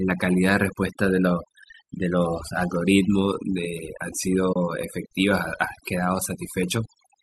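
Overdone noise removal runs throughout. Frequency bands near the estimated noise are pulled down or cut, leaving near-silent pauses with twinkling specks. AAC frame loss with muting occurs at 1.99 s, a gap of about 10 ms, and again from 4.53 to 4.56 s, about 30 ms. The missing frames were zeroed, so the sound fades out and back in, a brief dip the first time and a soft-edged hole the second, in what is likely a low-delay AAC stream.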